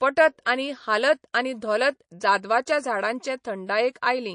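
Throughout, the speech sounds watery and swirly, with smeared consonants. The likely cause is MP3 compression at a bitrate near 40 kbps, zeroing weak frequency lines frame to frame. At 3.67 s and again from 3.93 to 3.95 s, a hiss rises about 12 dB, then about 14 dB, just before sharp attacks. This is pre-echo: the codec spread quantisation noise across a 52 ms block without switching to short blocks.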